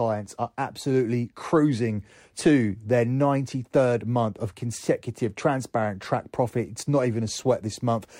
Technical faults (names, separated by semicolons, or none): none